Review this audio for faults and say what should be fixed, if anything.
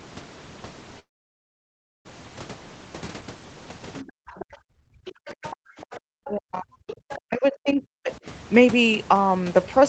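There's a long network dropout from 0.99 to 2.07 s. The receiver likely lost about a second of packets; it smears the last sound into a fading buzz, then falls nearly silent before the speech resumes with that stretch gone. Better network conditions or a larger jitter buffer with redundancy (FEC) would help.

Speech suppressed in double talk shows up from 4.02 to 5.90 s and again from 6.10 to 8.20 s. The talker's level dips by as much as around 40 dB, affecting roughly a second and a half of speech in each stretch, likely because the echo canceller couldn't tell the talker from the loudspeaker echo while both sides spoke. Tuning its double-talk detection to favour the near-end talker would prevent this.

The other side's voice is leaking through at 4.28–4.43, 5.07–5.56, 5.80–6.00, 6.88–6.93 and 7.10–7.19 s. These are short scraps about 15 to 20 dB below the talker, likely residual loudspeaker echo the canceller didn't remove. 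A headset or stronger echo suppression would keep them out.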